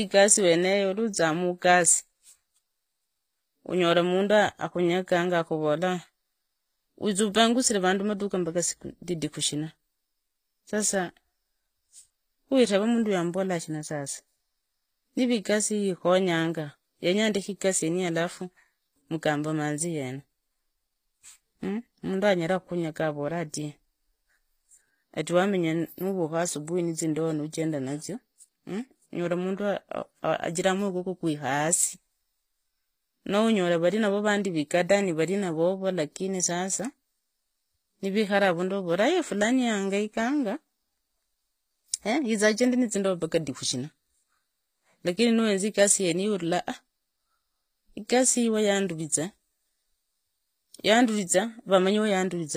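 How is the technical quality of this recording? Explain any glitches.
The recording has audible codec damage throughout. From start to finish the speech shows HE-AAC compression artefacts, likely from a low-bitrate stream in the region of 24 kbps. The treble above the coded band is synthesised by copying lower bands upward, so its harmonics don't align with the real ones. S sounds come out gritty and metallic, and nothing is present above 15.5 kHz.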